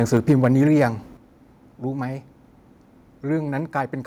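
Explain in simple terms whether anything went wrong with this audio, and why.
From 0.13 to 0.45 s the loudest syllables have a harsh, crackly edge. This is microphone overload: the signal was likely driven harder than the converter could handle, so the tops of the biggest peaks were sliced flat. Only a small share of the audio was cut this way, but the damage sits exactly on the loudest moments of that stretch.

The level also drops suddenly twice, at 0.17 s and again at 1.17 s, with the background falling along with the speech. This is the microphone volume being stepped down, most probably the call software reacting to the overload and lowering the input setting in one jump each time. The first step is slight, landing just inside the distorted stretch. The second, a second later, is much larger and leaves everything after it noticeably quieter.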